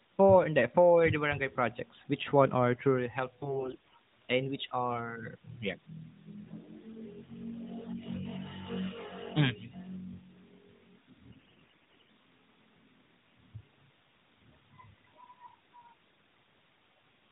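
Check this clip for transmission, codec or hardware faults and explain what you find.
Two bursts of AMR bit errors break into this speech clip. The first runs from 3.42 to 3.94 s, between "which one are truly" and "and which are". The second runs from 11.30 to 12.10 s. Both come from a weak radio link. The lightly protected bits in each AMR frame arrived flipped, with roughly one bit in seven wrong. The checksum on the critical bits still passed, so the decoder used the damaged frames instead of discarding them. The excitation pulses landed in the wrong positions, and the fine pitch, gain and spectral values drifted. Through both stretches the voice keeps its rough pitch and loudness but turns hoarse, scratchy and gargly. The longer second burst is about 40 frames of 20 ms each, which fits the 0.8 s it lasts. Outside the bursts the AMR narrowband mobile codec, running at 12.2 kbps, can be heard as a phone-band sound with nothing above 4 kHz, which fits its 8 kHz sampling.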